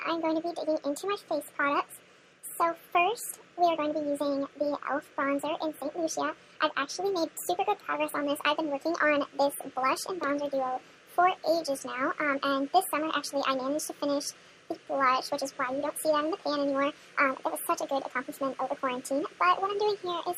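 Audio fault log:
Throughout: wrong sample rate. Everything runs 1.5 times fast and sits about 7 semitones high, which fits 32 kHz material played back at 48 kHz. Speed and pitch rise together by the same ratio, unlike pitch shifting or time stretching, where one changes alone.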